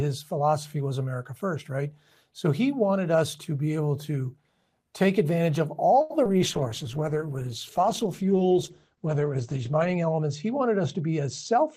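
At 6.01 s the speech freezes on one sound for about 87 ms, held with a faint buzz. This is a short stall from a late packet: the jitter buffer ran dry, the receiver stretched the last sound until the packet arrived, then resumed exactly where it left off, so nothing is lost.

Right after, at 6.24 s, a brief smear replaces about 40 ms of speech. This is short concealed packet loss: audio arrived too late to decode. The receiver bridged the hole with roughly 12 ms of synthesised continuation, shedding around 30 ms of the delay the stall had built up.

From 6.34 to 6.84 s the speech drags slightly, at about 94% speed with unchanged pitch, and sounds are drawn out. This is a jitter buffer slow-down: with its reserve low, the receiver repeated single pitch periods and slivers of pauses, adding about 39 ms.

From 6.43 s to the end the speech turns muffled and watery, losing everything above about 8 kHz where it previously reached about 20 kHz. 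This is a call bitrate drop. The bandwidth estimate fell, and the sound fits an encoder pushed from about 32 to 12 kbps, sitting at its lowest for 3.52 s.

From 11.01 to 11.68 s the speech turns hurried, running at about 106% speed at the same pitch. This is a jitter buffer speed-up: holding more audio than its target, the receiver cut out short runs of pitch periods, roughly 50 ms in total, to shrink the delay.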